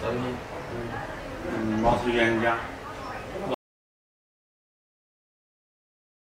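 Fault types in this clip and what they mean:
Audio dropout to silence: at 3.54 s the sound stops abruptly mid-flow and never returns, leaving about 2.8 s of silence through to the end of the clip. There is no fade and no residual room tone or noise floor in the gap. The cause is likely a lost input, such as a disconnected device, a failed link or an accidental mute, while recording continued. Whatever occurred after the cut is unrecoverable.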